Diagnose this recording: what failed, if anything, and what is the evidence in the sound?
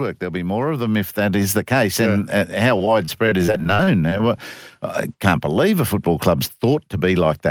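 Between 0.19 and 1.54 s the voice and the background noise swell together, ending about 6 dB louder than where they started. This is automatic gain rising, a fault in the call-processing stage. The gain control judged the input too quiet and raised its gain step by step over more than a second. Because it scales everything it receives, the room noise climbs right along with the speech.

From 2.78 to 4.2 s the speech turns choppy and robotic, with pieces missing throughout. This is repeated packet loss in the network stage. The sound points to around fifteen separate holes, the longest about 32 ms. Together they remove roughly 210 ms of audio. The receiver covers each hole by extending the last sound it received, and that concealment fills about 16% of the stretch. Each patch is followed quickly by the next, which produces the robotic texture.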